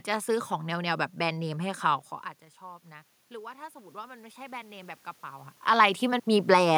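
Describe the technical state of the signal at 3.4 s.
At 3.4 s the signal is in the middle of an automatic gain rise that runs from 2.59 to 5.55 s. After the input level fell by 20 dB, as the talker moved away around 2 s, the gain control slowly raised its gain by about 7 dB. What sets this apart from a talker simply moving closer is that the room noise swells along with the voice, climbing gradually over roughly three seconds.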